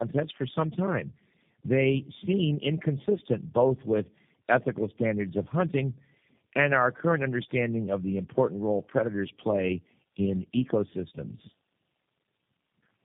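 Tandem speech coding runs throughout this speech clip: roughness, muffling and warble fit three low-rate speech codecs in a row, likely AMR-NB twice then G.729A, each recoding the last one's degraded output. Nothing is heard above 3.7 kHz.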